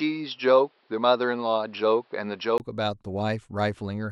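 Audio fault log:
0.0–2.6 s, input switched to a poorer device. Speech sounds dull, with nothing above 5.5 kHz and faint added noise. After a brief gap, it brightens and the level shifts, likely from a change of input device.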